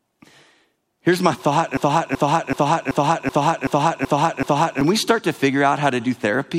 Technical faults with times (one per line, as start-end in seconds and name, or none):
1.77-4.81 broken-record loop